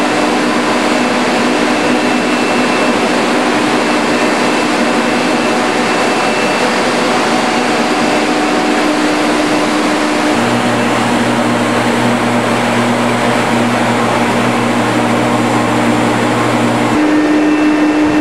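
Hard clipping runs throughout: the signal is driven about 6 dB past full scale, so roughly 2% of samples are flattened, giving crackle on peaks.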